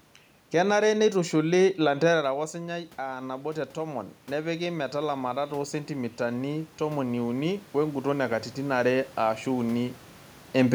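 Automatic gain rising runs from 1.97 to 8.86 s: after the talker moves away around 2 s, dropping the input by about 11 dB, the gain control slowly adds about 10 dB, so voice and room noise swell back up together.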